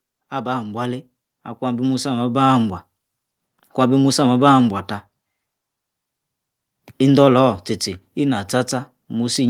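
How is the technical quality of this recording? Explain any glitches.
One glitch affects the level early on. From 0.3 to 2.8 s, automatic gain rising lifts the level by about 10 dB as the gain control compensates for quiet input; the background swells with the voice, unlike a speaker simply talking louder.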